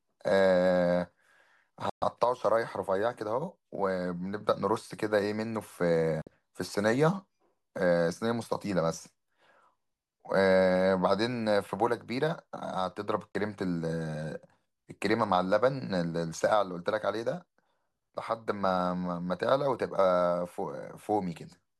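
Speech with a digital broadcast dropout at 1.90–2.02 s, 6.22–6.27 s and 13.32–13.35 s: the audio fades out in about 3 ms and falls silent for 120, 48 and 24 ms, which fits a receiver muting whole frames of about 24 ms that failed their checksums.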